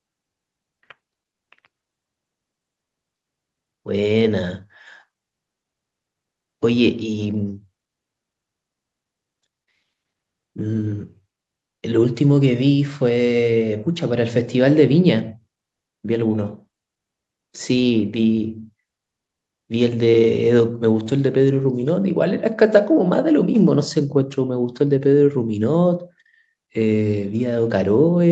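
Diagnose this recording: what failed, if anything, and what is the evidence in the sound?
Nothing failed here; the speech has simply come through a normal call chain, with the microphone processing trimming the lowest bass and the codec keeping everything below about 8 kHz, which is just what that path does.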